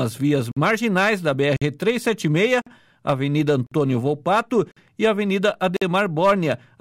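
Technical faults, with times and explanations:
0.52–0.57, 1.57–1.62, 2.62–2.67, 3.67–3.72, 4.72–4.77 and 5.77–5.82 s, gap between chunks: the audio was delivered in 1.0-second blocks, and each join left about 50 ms of silence, likely from padding or a late start of the next block. No sound is lost, but it stops dead at every seam, so short, hard-edged holes recur every 1.05 s, giving the audio a steady stuttering rhythm.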